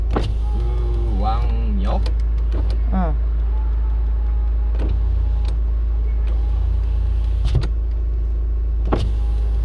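No technical faults can be heard anywhere in this recording of sounds.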